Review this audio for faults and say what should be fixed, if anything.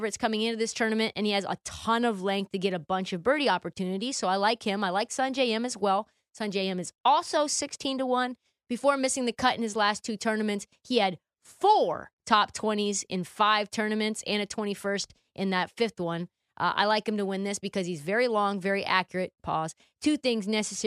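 Nothing here needs fixing: the signal holds steady level and continuity throughout, with no disturbance anywhere in the recording.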